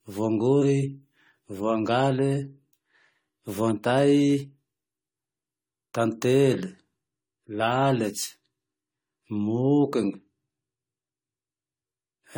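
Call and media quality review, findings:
Generation loss throughout: swirly, hollow, smeared attacks, worse than one 64 kbit/s AAC-LC pass explains. Likely about seven re-encodes on shifting frame grids, stacking quantisation noise and spectral holes.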